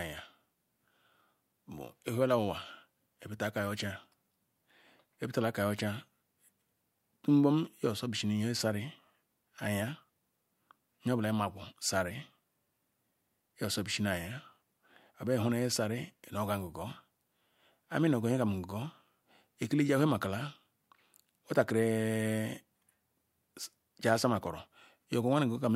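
Nothing in the speech recording points to a technical fault: the signal holds steady throughout, with no break, distortion or disturbance anywhere along its course.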